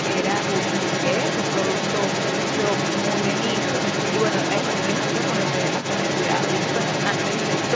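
Other side's voice leaking through runs across the whole speech clip, from 0.0 to 7.76 s: a second voice sits roughly as loud as the main talker, likely because the echo canceller failed to remove loudspeaker playback from the microphone. The call microphone path tops out at 8 kHz.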